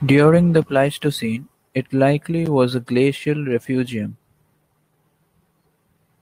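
Nothing in the speech recording points to a technical fault, and the signal holds steady and continuous throughout.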